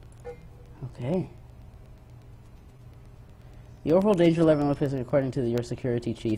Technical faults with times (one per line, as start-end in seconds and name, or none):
2.77 short concealed packet loss